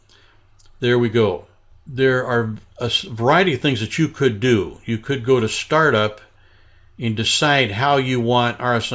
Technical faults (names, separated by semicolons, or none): none